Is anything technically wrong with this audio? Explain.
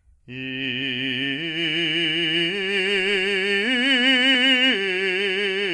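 Yes. The music carries plainly audible MP3 compression damage throughout, most likely from encoding at a very low bitrate. Nothing remains above 11.2 kHz. The encoder ran short of bits, cut the treble there and dropped weak detail. That fits a bitrate near 48 kbps.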